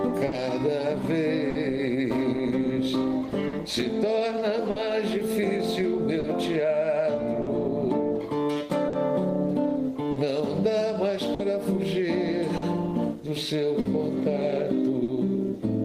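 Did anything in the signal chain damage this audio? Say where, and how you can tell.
Yes. The clock drift between sender and receiver is a network-stage fault: the sender's clock runs roughly 4 percent slow against the receiver's. The jitter buffer keeps draining, so the receiver must keep stretching and patching the audio, causing small, unevenly spaced hiccups.

The repeated timing corrections run from 0.02 to 8.85 s, where playback slows to 99 percent speed and adds roughly 70 ms overall. Each edit repeats a short slice to cover the slow sender.

There are two short stalls from a late packet, at 0.27 to 0.34 s and 1.50 to 1.57 s. In each, the buffer ran empty and the receiver held the last sound for 50 ms until data arrived, leaving a sound held too long.

Scattered short gaps appear between 3.48 and 15.10 s: about ten late or lost packets, the longest around 50 ms, concealed by continuing the previous sound. 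Together they fill roughly half a second, about 4 percent of that span, heard as brief ticks and smears.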